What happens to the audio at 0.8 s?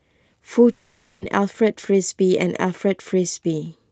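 At 0.8 s the sound smears into a buzzy, fading hiss that carries on from 0.71 to 1.23 s, then the speech resumes with a stretch skipped. This is likely a long network dropout, with the receiver filling about half a second of missing audio.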